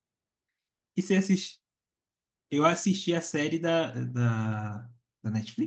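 No technical faults can be heard in the speech. It has passed through a call codec whose top end stops at about 8 kHz, with the coding texture that fits an Opus stream at around 24 kbps.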